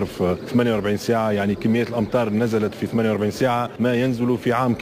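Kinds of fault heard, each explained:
Imaging from sample-and-hold upsampling: the rate was raised by holding each sample for several output periods with no smoothing filter, so mirrored copies of the spectrum sit around multiples of the original rate, which fits a source near 22 kHz brought up to 48 kHz. Across the whole clip the first image band fills roughly 11 kHz to 22 kHz, about 27 dB below the signal, heard as a bright metallic fizz that rises and falls with the sound.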